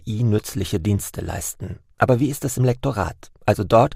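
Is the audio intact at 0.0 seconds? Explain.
Yes, the audio is intact at 0.0 seconds, with no fault present at that moment.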